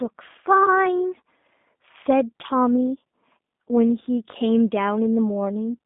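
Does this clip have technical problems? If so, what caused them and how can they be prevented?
Yes. The whole clip has the sound of the G.729 codec, and the damage is plainly audible. Everything above about 3.7 kHz is gone and the low end stops near 200 Hz, giving that narrow phone-line band. The speech sounds slightly rough and synthetic because the codec rebuilds it from a vocal tract filter, a pitch guess and a handful of pulses per frame, which fits an 8 kbit/s G.729A stream. To prevent it, record or route the call through a wideband codec such as G.722 or Opus rather than G.729.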